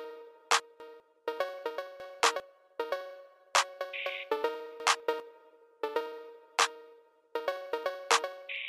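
Around 0.6 to 1.0 s there's a jumbled patch where chunks come out of order. It sounds like a 200 ms piece arrived one slot late and got played after the piece that should have followed it, so those two swap places. Nothing goes missing, but the sound scrambles briefly at the hard joins. The same swap shows up again at 2.0 to 2.4 s and at 4.8 to 5.2 s.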